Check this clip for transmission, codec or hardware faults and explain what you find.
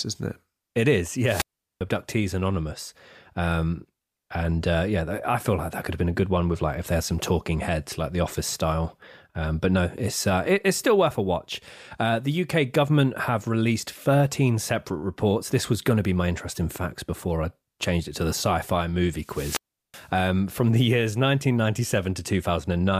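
There are two wireless microphone squelch dropouts in this speech clip, from 1.24 to 1.81 s and from 19.18 to 20.10 s. Each time, the radio link from the analogue FM microphone weakens until the receiver's squelch shuts its output. A brief swell of hiss comes first, then a muted gap of near silence, about 0.39 s in the first event and 0.37 s in the second, before the voice comes back.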